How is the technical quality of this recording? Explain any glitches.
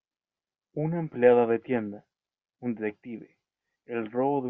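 No audible glitches or faults.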